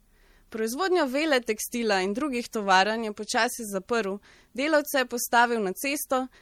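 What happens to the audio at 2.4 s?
At 2.4 s the speech carries MP3 compression artefacts, as it does throughout. It sounds swirly. Bits were likely starved, which fits roughly 64 kbps.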